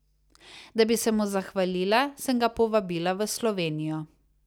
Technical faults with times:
none

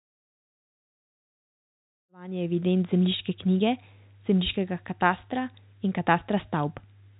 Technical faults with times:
none

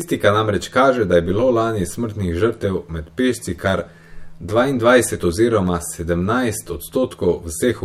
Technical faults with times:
0.00-7.85 channel delay (comb filtering)

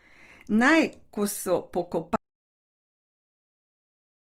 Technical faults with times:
0.00-4.32 Opus compression
2.16-4.32 audio dropout to silence

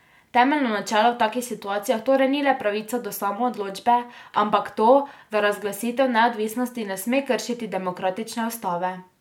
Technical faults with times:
none

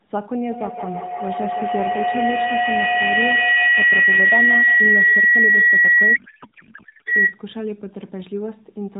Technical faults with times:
6.16-7.07 codec payload misread

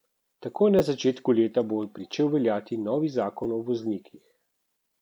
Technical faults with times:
0.79 repeated buffer
2.12 repeated buffer
3.44 repeated buffer

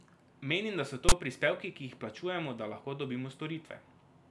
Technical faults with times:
1.09-1.12 file tags played as audio

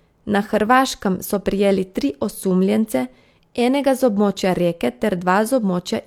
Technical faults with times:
none

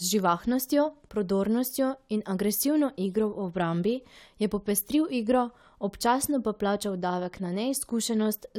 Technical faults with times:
none

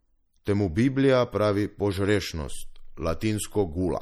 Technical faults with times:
0.00-4.01 MP3 compression

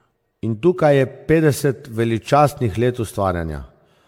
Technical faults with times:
0.00-4.07 generation loss

